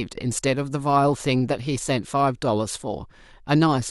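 Throughout the speech, a resampler restarted on every block leaves faint ticks every 100 ms, a steady 10 Hz rhythm. Each block was converted blind to its neighbours, so each edge carries a small error. Unlike dropouts, nothing is lost, and the ticks vanish in pauses.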